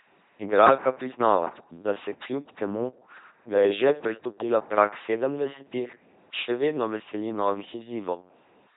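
Throughout, the speech passes through an LPC-10 vocoder. Each instant becomes pure buzz or pure hiss, giving a harsh robotic voice. Nothing sounds above 3.9 kHz, consistent with 2.4 kbit/s coding.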